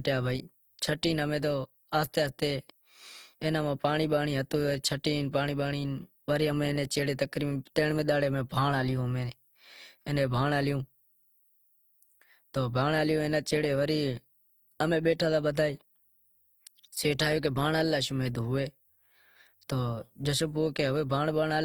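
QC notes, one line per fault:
Throughout: Opus compression, likely. The speech is grainy and rough because band detail is filled with noise. This fits a low bitrate near 24 kbps.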